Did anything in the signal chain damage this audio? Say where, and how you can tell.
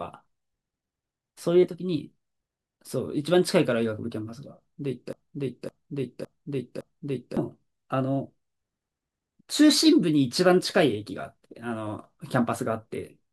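Yes. From 5.13 s to 7.37 s the speech turns into a broken-record loop. A fragment of about 0.56 s plays four times in a row, each repeat identical and butted against the last. Nothing new comes through during that span. The speech that belonged there is simply gone. This points to the playback or streaming stage. The likely cause is a stalled buffer that kept re-sending the last block it held until fresh data arrived.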